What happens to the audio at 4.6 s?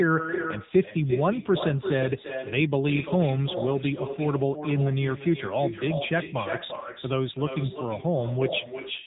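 At 4.6 s you're hearing two faults that run through the whole clip, so nothing special happens at that exact moment. First, echo with no canceller: the far end is playing the call over a loudspeaker, its mic picks that up, and nothing strips it out, so the talker's own speech comes back about a third of a second later. The copy sits roughly 8 dB below the original and sounds thinner, trailing every syllable.

Second, the AMR narrowband mobile codec. Nothing gets through above 3.8 kHz, which gives the muffled, boxed-in phone quality. AMR-NB rebuilds speech from a vocal-tract model fed by sparse pulses, and here the damage is plainly audible. The speech sounds buzzy and a bit synthetic, which fits one of the lower AMR modes, around 8 kbps. Because the echo passes through the same codec, it picks up that same buzzy, band-limited character.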